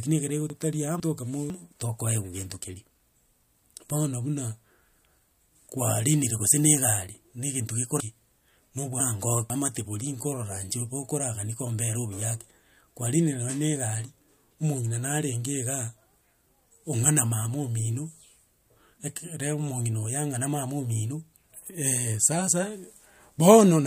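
Chunks out of order at 0.5–1.5 s and 8.0–9.5 s: a 500 ms speech chunk plays one, then two, chunks late, leaving jumbled passages with hard joins.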